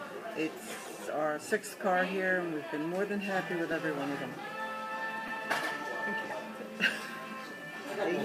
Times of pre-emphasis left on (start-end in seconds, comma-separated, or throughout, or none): none